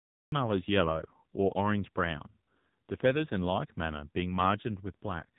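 From the start the file holds digital silence until about 0.32 s, where the speech jumps in partway through a sound. This cut-off start means capture began late. Unlike a noise gate or fade-in, there is no ramp or breath of onset, just an instant full-level entry.

Throughout, the speech carries the AMR narrowband mobile codec sound. Nothing passes above 3.8 kHz, and the vocal-tract model, fed too few pulses per frame, makes the voice plainly buzzy and synthetic, which fits a low rate around 7.4 kbps. A simple low-pass filter would muffle without this artificial buzz.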